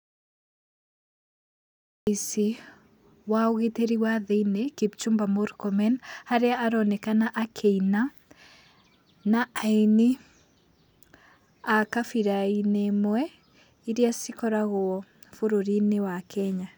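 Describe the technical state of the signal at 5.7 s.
At 5.7 s the speech signal is intact, with no audible technical fault at that moment.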